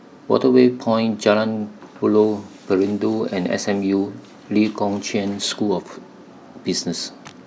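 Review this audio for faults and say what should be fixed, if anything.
No faults found; nothing needs fixing.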